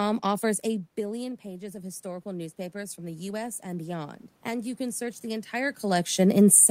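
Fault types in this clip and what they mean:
Automatic gain rising: around 0.5 s the talker seems to drift away from the mic, and the input drops by about 14 dB. From 0.97 s the AGC starts slowly pushing its gain back up, about 8 dB in total by 5.85 s. You hear the voice and the room noise swell together over those five seconds, so the background creeps up right alongside the speech instead of staying put.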